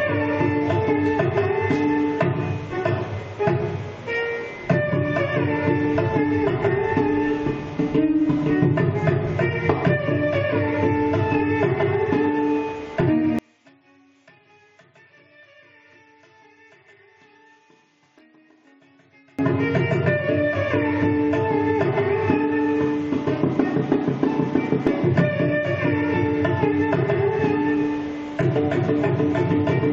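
One channel inverted, from 13.39 to 19.39 s: the sound collapses by about 33 dB, leaving only a faint trace of what differs between the channels. The likely cause is reversed polarity on one side, so material common to both cancels.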